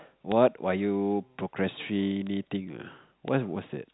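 Three single clicks land at 0.32, 2.27 and 3.28 s, each a bit error spike: one sample with a flipped bit jumps by a power of two and snaps straight back, so you get a dry, broadband tick that has nothing to do with the speech over the telephone-band audio, which stops around 3.9 kHz.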